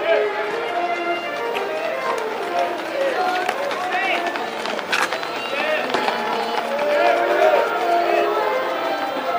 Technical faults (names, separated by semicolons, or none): crude rate conversion